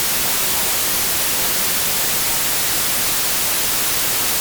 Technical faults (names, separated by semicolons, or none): wrong sample width